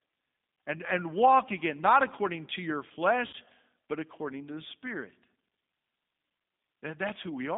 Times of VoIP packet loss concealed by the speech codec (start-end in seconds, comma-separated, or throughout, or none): 3.27-3.35